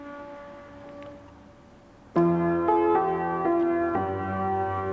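No faults found; the band stops at 8 kHz, consistent with a wideband call codec on a normal call path.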